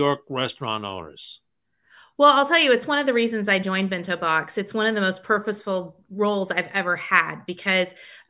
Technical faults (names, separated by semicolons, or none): none